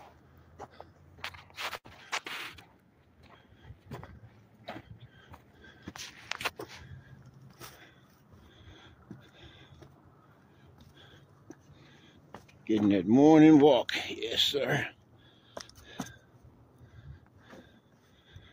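At 1.77 s the audio hangs briefly in a short stall from a late packet. A packet missed its playout time, the jitter buffer ran dry, and the receiver stretched the last sound for about 73 ms until the packet arrived, then resumed from the same point. Nothing is skipped, but playback now runs about 73 ms later. On a spectrogram, 1.77 to 1.87 s shows a smeared, frozen band of repeated spectral texture. The waveform there has near-identical repeating cycles with a slight level dip. From 7.48 to 7.92 s a jitter buffer speed-up makes the sound run hurried at unchanged pitch, at about 113% speed. The buffer had built up more audio than its target, so the receiver trimmed short pitch-period slices over and over, removing around 70 ms in total. On a waveform the periodic cycles are packed more tightly across that stretch with small seams where slices were cut. The spectrogram shows harmonics at the same heights but with events compressed in time.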